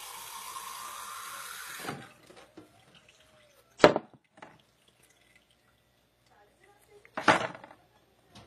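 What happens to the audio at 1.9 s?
Around 1.9 s you're hearing the same thing that runs through the whole clip: the sound has likely been through transcoding between lossy codecs. A first coarse encode, which fits an early WMA at a modest rate, was then squeezed again by low-rate HE-AAC. The second codec wastes bits re-encoding the first one's artefacts and adds its own, so both layers of artefacts sit together. The top end stops at about 21.3 kHz.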